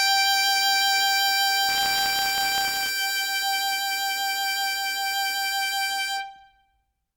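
A music recording carries two separate faults. From 1.68 to 2.9 s there is buffer tearing: the program filling the playback ring buffer and the hardware draining it have drifted into each other, so in every period a small sliver of the buffer, only a few percent, still holds audio from roughly 30 ms earlier, butted against the current material with hard joins. The result is a robotic 100 Hz buzz riding on the music, which fits a 10 ms period. On a spectrogram it shows as a fine picket of vertical lines every 10 ms with a comb of 100 Hz harmonics, and on the waveform as tiny step discontinuities at that spacing. From 4.38 s to the end of the clip, sample clock jitter adds a grainy hiss. The converter's clock wanders on the order of a microsecond or two, so samples land slightly early or late and the error grows on steep, loud or bright passages, at roughly 30 dB below the music. A spectrogram shows a raised broadband noise floor that swells with the louder, brighter moments instead of sitting at a fixed level.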